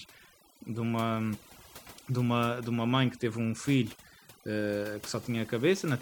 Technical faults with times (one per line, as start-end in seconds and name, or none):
0.00-6.01 overdone noise removal